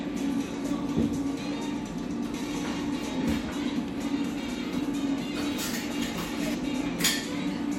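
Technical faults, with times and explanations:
6.54 s, compressed frames skipped: the sound jumps ahead by roughly 150 ms, about four missing frames of 32 ms.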